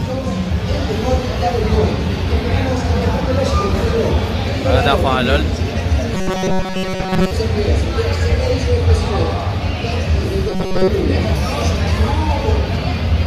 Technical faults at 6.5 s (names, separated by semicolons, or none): robotic sound from repeated short buffers